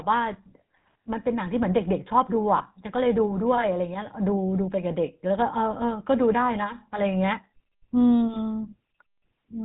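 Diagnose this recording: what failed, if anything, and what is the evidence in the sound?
At the codec stage, the whole recording carries the buzzy, gravelly roughness of the GSM full-rate codec, with nothing above 4 kHz, which fits 13 kbps. Pulse-driven vocal-tract modelling causes it. Plain band-limiting would dull the sound without adding this rasp.

At the network stage, lost GSM frames from 2.58 to 2.63 s leave one 20 ms frame replaced by the previous frame's settings, which sounds like a brief metallic ring. A dropout would give silence or a click instead.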